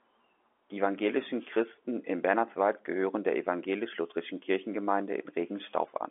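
Nothing technically wrong turns up here: it's speech carried over an ordinary G.711 telephone line, so the sound sits in the narrow phone band and stops at around 3.6 kHz, which is simply how that format handles audio.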